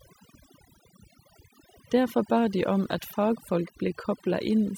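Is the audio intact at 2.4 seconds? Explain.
No. Overdone noise removal runs throughout. The suppression was set too strong, pulling near-noise bands down. Background drops and breaks up into twinkling specks.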